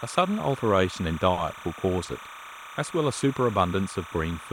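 Timecode bleed runs through the whole clip. Linear timecode from a nearby track or cable has leaked into the speech. The code is a square wave flipping between tones near 1 kHz and 2 kHz, paced at 29.97 frames per second. It sits roughly 15 dB below the speech. The result is a constant chirping warble behind the talker.

From 1.33 to 1.54 s there is a short stall from a late packet. A packet arrived after it was needed, and the jitter buffer ran dry. The receiver held the last sound for 40 ms while it waited, then resumed where it stopped. Nothing is lost. One sound is simply stretched, with a faint buzz or dip, and the delay grows by 40 ms.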